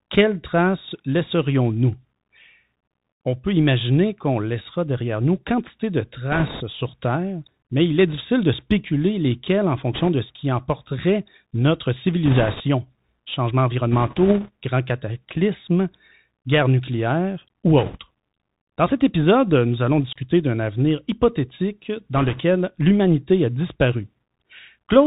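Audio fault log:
throughout: Bluetooth CVSD headset codec. The speech is narrowband, with nothing above about 4 kHz. Sibilants turn scratchy and thin. A fine, granular hiss sits under every phrase. Loud, bright moments smear and distort because the codec sends only an up-or-down bit per sample and its step size cannot keep pace with fast changes. The damage is plainly audible, and the sound fits a 64 kbps one-bit delta stream.
6.32–6.62 s, 9.93–10.09 s, 12.26–12.61 s, 13.92–14.49 s, 17.78–17.97 s, 22.15–22.40 s: bit errors on a Bluetooth voice link. Each burst lays a rushing, crackly noise over the speech. There are no sharp clicks. Every flipped bit moves the signal by only one step, sized to the speech level, and the decoder lets the error fade. The rate of bit errors varies from burst to burst, from around 1.5 to 4 percent. The 12.26 s burst is the roughest and the 9.93 s burst the mildest.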